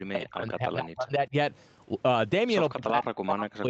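Speech that sinks sharply twice, from the start to 1.33 s and again from 2.7 s to the end, dropping by roughly 35 to 40 dB. This is speech suppressed in double talk, most likely an echo canceller that heard the far side talking at the same moment and, unable to separate the local voice from the loudspeaker echo, turned both down. Throughout, the band stops near 8 kHz, as expected from the Opus call path.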